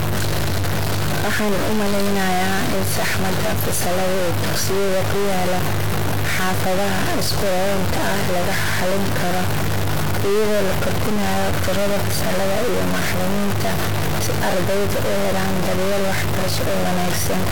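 A stuck bit runs through the whole speech recording. Harsh, buzzy distortion sits on the talking, and loud noise fills the pauses. One high bit, worth around -15 dBFS, is likely held fixed by a faulty line or converter, shifting about half the samples by that step.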